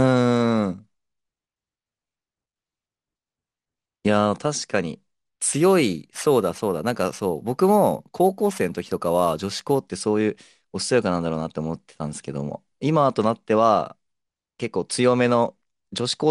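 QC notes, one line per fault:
5.53–9.79 s, imaging from sample-and-hold upsampling: a bright metallic fizz sits on the speech, rising and falling with its level, about 24 dB below it, filling the band from about 11.03 kHz to 22.05 kHz. Each sample was repeated without smoothing while doubling the rate, pointing to 22 kHz material raised to 44.1 kHz, so mirrored spectrum copies leak in above the old limit.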